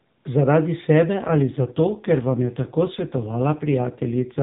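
Speech carried over an AMR narrowband mobile link, with nothing above 4 kHz. From 1.14 s to 4.42 s the AMR rate drops: the band stays the same, but the voice turns rougher and more synthetic, which fits a switch from 12.2 to 5.9 kbps.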